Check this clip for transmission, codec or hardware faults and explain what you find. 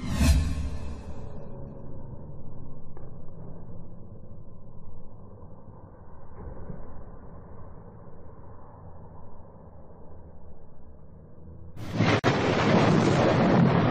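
There's one fault, a gap at a join of encoded pieces, from 12.19 to 12.24 s. Two separately encoded chunks were butted together untrimmed, so encoder delay and end padding left about 46 ms of silence. The sound drops out with smeared edges, then resumes where it stopped.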